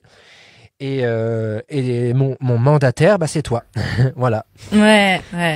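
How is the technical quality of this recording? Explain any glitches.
Nothing technical stands out here; I didn't hear any glitches or dropouts in this recording at all.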